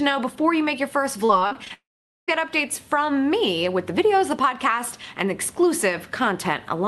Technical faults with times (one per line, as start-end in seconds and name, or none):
1.25-1.72 repeated packet loss (robotic sound)
1.74-2.29 long network dropout